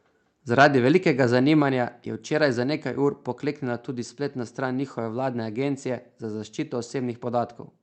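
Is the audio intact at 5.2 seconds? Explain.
Yes, the speech at 5.2 seconds is intact, with no dropout, glitch or other fault at that moment.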